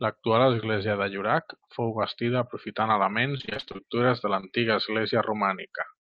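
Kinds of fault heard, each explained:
repeated packet loss (robotic sound): From 3.37 to 3.80 s, after "fou bastida aprofitant", a rapid run of holes under 25 ms each is patched, making about half the stretch choppy and robotic, not one isolated glitch.
short concealed packet loss: Around 4.40 to 4.44 s, about 20 ms of audio is missing and bridged by extending the preceding sound, a single brief smear rather than a sustained choppy run.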